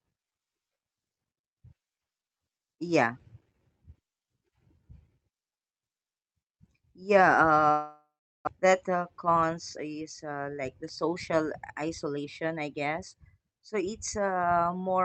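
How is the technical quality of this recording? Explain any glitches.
The speech has two linked faults in the middle, heard through a band-limited call path whose top end stops near 8 kHz, which fits an Opus codec at about 32 kbps.

From 7.71 s to 8.49 s there is a long network dropout. The sound smears into a fading buzz, then goes quiet for a few tenths of a second before resuming. About 0.6 s of speech is lost outright. The likely cause is a stall in packet delivery: the receiver extended the last audio to cover the gap, then fell back to near-silence, and the later packets arrived with the delay shifted by roughly 150 ms.

From 8.63 s to 10.39 s comes a jitter buffer speed-up. After the dropout the buffer holds about 150 ms more than its target. To drain it, the receiver trims one or a few pitch periods repeatedly, playing the speech at about 107% speed with unchanged pitch. The passage sounds slightly rushed until the buffer returns to its normal depth.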